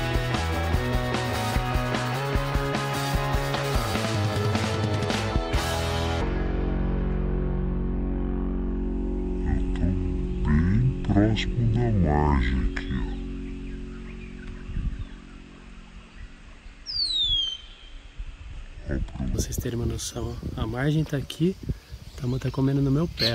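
From 6.21 s to 19.35 s the audio plays as a section at the wrong speed: it runs at 0.552 times its proper rate, so everything drags and drops about ten semitones, turning deep and sluggish before snapping back. The likely cause is an editor or player clocking that stretch wrongly. Unlike a pitch shift, which lowers tone but keeps timing, here tempo and pitch fall together, and unlike a time-stretch, the slowing never leaves pitch intact.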